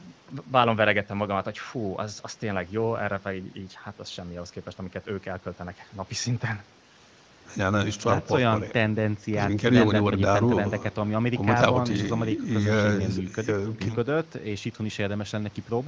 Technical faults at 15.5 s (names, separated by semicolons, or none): none